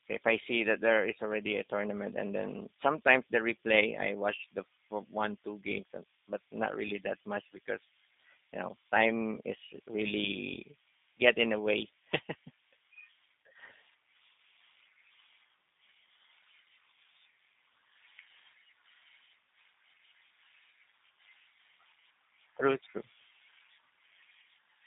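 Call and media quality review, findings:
Throughout the clip, speech is band-limited to 150 Hz–3.7 kHz, narrow and boxy, with plainly audible roughness and a buzzy, synthetic texture. The probable component is the G.729 codec (G.729A), consistent with 8 kbit/s. It resynthesises speech from a vocal tract filter, a pitch predictor and sparse pulses.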